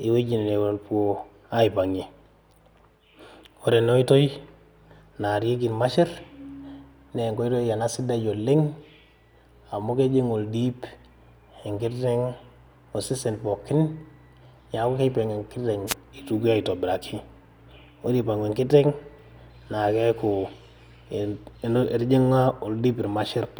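At 15.87 s the speech is interrupted by a wireless microphone noise hit lasting about 70 ms, ending near 15.94 s. The radio link from an analogue FM transmitter briefly faded as reflected paths cancelled the direct signal at the receiver. With the carrier weakened, the receiver's own noise rose above the programme, heard here as a short swish of static.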